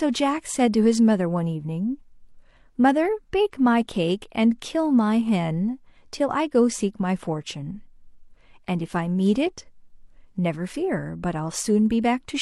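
Nothing stood out as a technical problem on listening to this speech recording.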